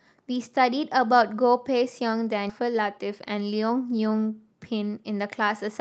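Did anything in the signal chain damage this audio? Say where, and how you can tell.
Yes, and both problems sit in the call path. At 2.49 to 2.51 s there's a skip ahead: the audio jumps forward with essentially no gap, so roughly 0.7 s of speech is simply gone and the two sides butt straight together. The telltale is a sudden discontinuity with no fill or fade. Later audio was already queued, and the stretch in between was dropped, cutting the delay by about the same amount.

Right after that, from 2.60 to 4.15 s, you get a jitter buffer speed-up. Speech runs about 11% fast while the pitch stays put, so it sounds hurried rather than chipmunky. That's the receiver trimming tiny pitch-period-sized slices over and over to shed extra buffered delay, about a fifth of a second in total. It's all audible against the call codec's usual band limit, with nothing above roughly 8 kHz.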